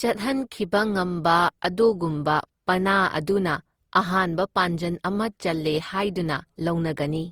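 Throughout the speech, the audio was likely re-encoded roughly seven times through a lossy codec. Its character fits Opus at about 48 kbit/s. This is generation loss: each pass requantised on a shifted frame grid, so the sound turns swirly, hollow and smeared, with blurred onsets.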